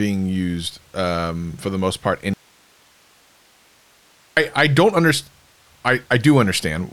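From 2.34 to 4.37 s, after "for the most part", an audio dropout to a faint residue leaves abrupt hiss, likely from an upstream signal break.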